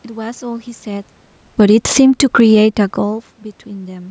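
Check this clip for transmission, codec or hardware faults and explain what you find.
Two automatic gain control faults affect the speech, one overlapping the other.

Automatic gain falling, 1.44 to 3.28 s: the gain control judged the input too loud and eased its gain down by about 3 dB, so voice and room noise sink together.

Automatic gain rising, 2.25 to 3.03 s: after the input dropped by about 24 dB, the control raised its gain by about 4 dB, swelling voice and background together over most of a second. The level shifts near 1 s and 2.5 s sound like the talker moving relative to the microphone.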